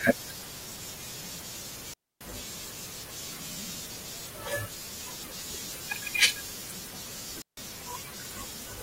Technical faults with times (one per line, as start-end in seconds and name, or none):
1.93-2.21 digital wireless dropout
7.42-7.57 digital wireless dropout